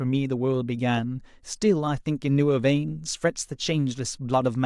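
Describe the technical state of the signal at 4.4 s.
At 4.4 s the speech signal is intact, with no audible fault at that moment.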